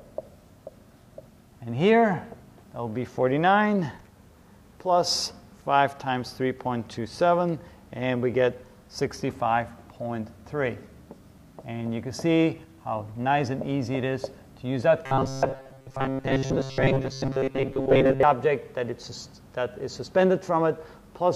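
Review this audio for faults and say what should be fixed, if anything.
Audio data likely arrived too seldom between 15.06 and 18.23 s, so the software kept replaying a short buffer of about 7.5 ms in place of the real signal. This produces robotic sound from repeated short buffers: roughly 70 percent of that span is repeats, imposing a rigid, metallic 134 Hz buzz that only loosely follows the original. A larger buffer or higher scheduling priority for the audio thread, so fresh data arrives on time, would prevent it.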